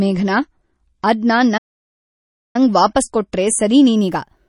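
The player opened this speech on a low-bitrate version of an adaptive stream and stayed there until about 3.96 s, when it moved up to a better version. For that opening stretch the treble is missing, the sibilants sound dull, and codec artefacts are more obvious, which fits an MP3 stream at around 32 kbit/s. At 3.96 s the quality jumps to something closer to a 128 kbit/s encode, with no gap.

Within that low-quality stretch, from 1.57 s to 2.56 s, there is a playback stall. The player most likely ran short of data or had its thread held up, so its output stopped delivering audio. The speech cuts off in mid-flow, leaving about 0.97 s of silence, and then picks up again.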